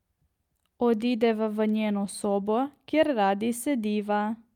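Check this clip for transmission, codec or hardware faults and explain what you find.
Nothing in the speech points to a transmission, codec or hardware problem, and the signal holds steady and continuous throughout.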